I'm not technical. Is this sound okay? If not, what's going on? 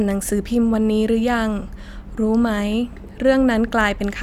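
No. Clock drift buffer slips from about 0.74 s to 3.91 s give the speech a click roughly every 1.06 s, about four in all. The likely cause is two pieces of equipment each keeping their own time, with one running slightly fast, around 150 parts per million. The gap between them slowly builds up, and a handful of samples gets skipped or repeated to catch up, producing each tick.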